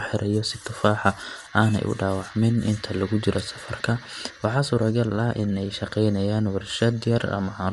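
From start to finish the speech has a clear top-end ceiling, with nothing above about 11.6 kHz, and a grainy, breathy sheen on the consonants and voice, which is plainly audible. That's most likely Bluetooth LC3 compression. The codec sheds upper-spectrum detail and papers over the gaps with shaped noise, hence the fizzy texture. The amount of damage fits something like a 48 kbps stream using 10 ms frames.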